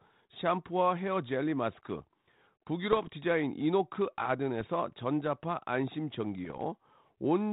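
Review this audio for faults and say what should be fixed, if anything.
Bit errors on an ADPCM link cause three rough, poppy bursts: 2.92 to 3.09 s, a short one at 4.60 to 4.64 s, and 6.45 to 6.61 s. Each flipped bit upsets the decoder's step size and predictor, so the damage rings on for a few milliseconds instead of staying a single click. The error rate sounds like a few tenths of a percent. On the waveform they show as sudden spikes and brief level jumps. On a spectrogram they appear as vertical broadband smears up to the 4 kHz ceiling of the 32 kbit/s G.726 band. Error protection or a cleaner radio path on the link would prevent them.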